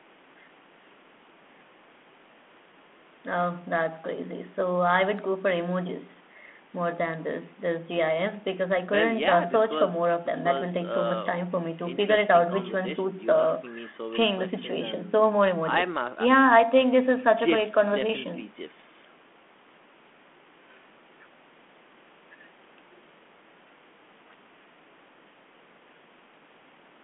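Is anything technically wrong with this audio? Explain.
No, nothing is technically wrong with this audio.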